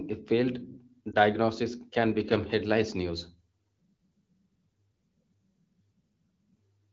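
At 1.11 to 1.15 s a lost AMR speech frame is concealed by reusing the previous frame's parameters, giving a brief dip or warble; the waveform shows a short amplitude notch.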